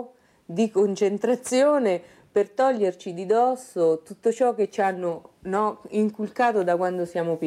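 No technical faults can be heard anywhere in this audio. Nothing in the recording, transmission or playback chain draws attention to itself at any point.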